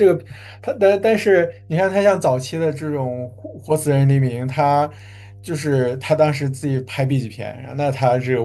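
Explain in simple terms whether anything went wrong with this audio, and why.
There's a mains hum running under the speech from start to finish: a steady low 50 Hz drone, sitting well below the voice. It happens when a ground loop or a nearby transformer leaks the building's electrical supply into the recording.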